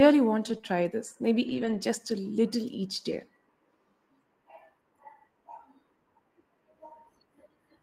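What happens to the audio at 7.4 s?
Nothing goes wrong at 7.4 s; the speech runs through that moment intact, with no dropout, click or distortion.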